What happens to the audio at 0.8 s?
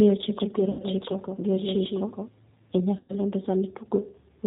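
A run of voice packets went missing and the decoder covered the gap with VoIP packet loss concealment from about 0.71 to 0.83 s, roughly 80 ms of lost audio, which fits about eight 10 ms frames. With nothing new arriving, the decoder kept replaying its last pitch and vocal tract filter at falling gain, so the sound smears into a buzzy tone or coloured noise that fades. Because each frame is predicted from the previous one, the signal stays weak and distorted for a short stretch after packets resume.

All of this sits on G.729 coding at 8 kbit/s, whose damage is plainly audible. Rather than sending the waveform, the codec models each 10 ms frame with a vocal tract filter, a pitch predictor and a handful of pulses. Nothing above 4 kHz survives, so the sound is band-limited, with a rough, slightly synthetic texture, and the concealed sound around 0.8 s is built from that same coded pitch and filter.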